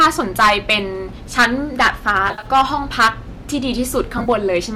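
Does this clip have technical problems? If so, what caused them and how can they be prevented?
Yes. Hard clipping runs through the whole speech clip: the level is pushed roughly 12 dB past what the chain can pass, so a few percent of the peaks get sliced flat, and that adds a gritty crackle on every loud syllable. Keep gain staging lower before the converter so peaks stay under full scale.

There's also AAC frame loss with concealment, from 2.28 to 2.46 s and again from 4.18 to 4.28 s. The decoder is patching the gaps from the last good spectrum, which gives short smeared, phasey blips. The first stretch is about 100 ms missing over about 140 ms, and the second is about 50 ms over 80 ms, which fits lost 10 ms frames on a low-delay AAC link. To prevent it, add jitter buffering or forward error correction on the network path.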